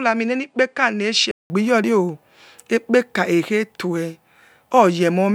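From 0 to 1.5 s the input was likely switched to a poorer device. The speech is cut off above 9.6 kHz, a few decibels quieter, and sits over a faint new noise floor, sounding dull and boxy until a 0.19 s silence marks the switch.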